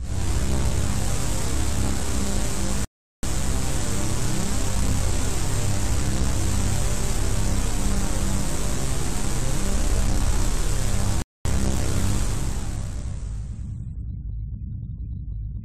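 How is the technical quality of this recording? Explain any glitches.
The recording is interrupted twice by a rebuffering stall. At 2.85 to 3.23 s and 11.22 to 11.45 s, playback ran out of downloaded audio and paused, leaving silences of 0.39 s and 0.23 s. The sound then resumes exactly where it stopped, with nothing skipped.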